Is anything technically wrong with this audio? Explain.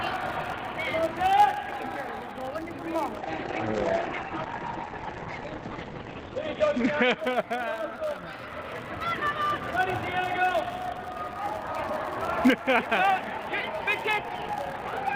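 Yes, two things. First, there's a filter restarted on every block, all the way through: each block starts from a blank state, so it kicks off with a tiny transient. That gives a steady 100 Hz buzz, one tick every 10 ms, riding on the sound's level.

Second, a call bitrate drop from 3.16 to 7.47 s. The encoder got squeezed, which sounds like a fall from roughly 32 kbps to about 12 kbps, bottoming out for about 3.2 s. The top end narrows from 20 kHz to 8 kHz, so things turn muffled and coarse, then recover.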